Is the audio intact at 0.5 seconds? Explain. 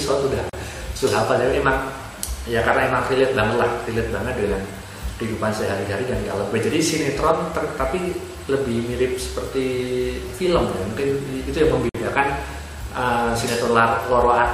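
No. A 37 ms dropout from 0.50 to 0.53 s cuts the sound with smeared edges: a gap at a join of encoded pieces, with encoder padding left untrimmed.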